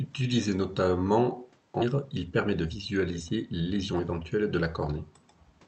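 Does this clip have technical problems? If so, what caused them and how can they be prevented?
Yes. At 1.81 to 1.83 s there is a skip ahead. Roughly 0.7 s of speech is missing, and the two sides are joined with no silence in between, so the speech simply lurches forward. The audio was discarded in transit or by an overflowing jitter buffer while later packets were already queued. A packet-loss dropout would leave a gap or a concealment smear instead. Prevention: size the jitter buffer to absorb bursts and avoid flushing it on overflow.

From 1.91 to 4.13 s the jitter buffer speed-up runs the speech at about 111% of normal rate. The buffer held more audio than its target, so the receiver trimmed small pitch-period slices repeatedly, removing around a third of a second in total. It sounds hurried, but pitch stays unchanged, which sets it apart from a resampling or clock error where pitch rises with speed. 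This runs over the Opus call path at 64 kbps, whose bandwidth stops at 8 kHz. Prevention: reduce network delay bursts so the buffer needs less catch-up.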